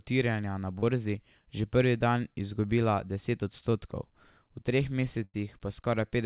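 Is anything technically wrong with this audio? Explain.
Yes. The speech has two kinds of packet-loss fault, heard through a call path whose audio stops at 4 kHz, which fits narrowband G.711 A-law at 64 kbps.

Short concealed packet loss occurs at 0.79–0.83 s and at 3.71–3.73 s. About 30 ms and then 10 ms of audio never arrived in time, so the receiver extended the preceding sound from its pitch, or as shaped noise if it was unvoiced, and then blended back in. Each is a brief smear or wobble. Unlike a burst, the gap is too short for any audible fade.

A burst of packet loss runs from 5.24 to 5.35 s. About 100 ms went missing in a row. Concealment carried the last sound forward while turning it down, so it comes across as a held buzz or fading hiss before the speech resumes further on. The length and the audible decay are what set it apart from the short smears: a stretch of speech is actually skipped rather than just blurred.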